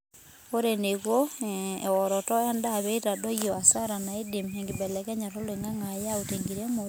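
No faults detected anywhere in the speech.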